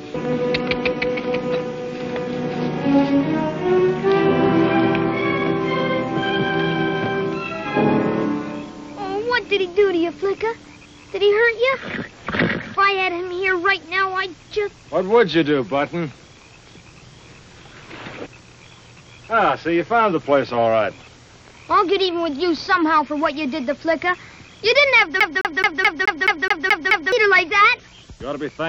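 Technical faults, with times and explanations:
25.2 to 27.12 s, CD stuck on one turn: a scratch or flaw on the disc keeps knocking the laser back by one track at the same point of each revolution, so the player never gets past that spot. The result is a short slice of about 0.21 s (213.61 ms) replayed nine times in a row, each restart marked by a brief mute at the jump, giving the quick, perfectly regular stutter of a skipping CD before normal playback resumes.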